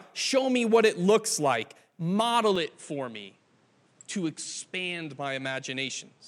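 At 2.56 s the speech turns duller and stays that way to the end. Nothing remains above 10.3 kHz, the level drops by about 5 dB, and a faint new background noise appears. There is no gap. The likely cause is an input switched to a poorer device.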